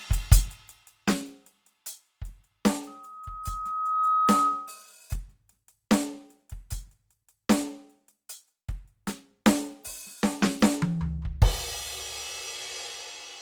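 Opus compression, likely, across the whole music clip: tones sound grainy and rough with noisy fill, which fits a low-rate encoder near 24 kbps that keeps band energy but not detail.

Loudspeaker feedback squeal from 2.87 to 4.93 s: a 1.3 kHz tone swells over about a second to sit about 5 dB above the music, as a microphone re-amplifies its own loudspeaker.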